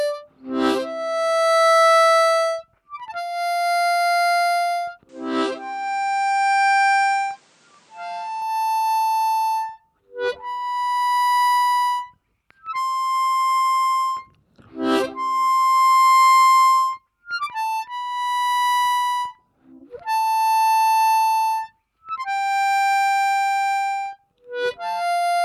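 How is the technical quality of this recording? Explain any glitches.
One glitch stands out. Input switched to a poorer device, likely, from 5.09 to 8.42 s: the band narrows, cutting everything above 9.8 kHz so the sound turns duller, and a faint new background noise appears. The level holds steady with no gap at either switch, then full clarity returns.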